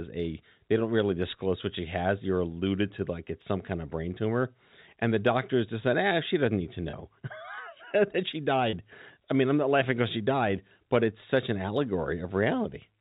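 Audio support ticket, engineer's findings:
Packet loss with pitch repetition: two brief held, buzzy stretches, 6.90–6.93 s after "she doesn't need to" and 8.70–8.73 s between "that she" and "I mean I'm not". Each gap is 30 ms, which fits one lost packet. The receiver's concealment repeated the last pitch period across the gap. The 4 kHz telephone band from the G.711 A-law path is audible throughout.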